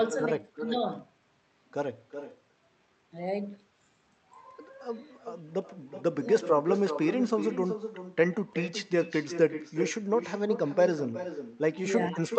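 Echo with no canceller runs throughout the clip. The far end is playing this speech over a loudspeaker, its microphone picks it up, and nothing removes that pickup before sending it back. Every phrase is therefore trailed by a second copy arriving roughly 0.4 s later and about 11 dB quieter. The copy sounds thinner than the original, and because of the delay each syllable gets a shadow.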